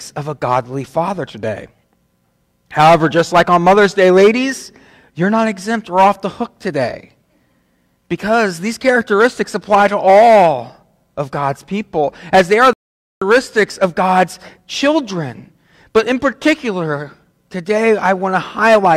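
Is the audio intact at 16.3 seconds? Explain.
Yes, the audio is intact at 16.3 seconds, with nothing to be heard there that points to a dropout, glitch, distortion or other technical fault.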